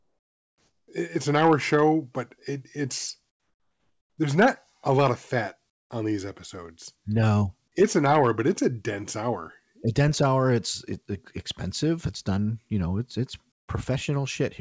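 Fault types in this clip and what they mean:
Comfort noise in place of the background: during pauses, likely from discontinuous transmission, the real background becomes steady featureless hiss, about 3 to 19 dB quieter, four times.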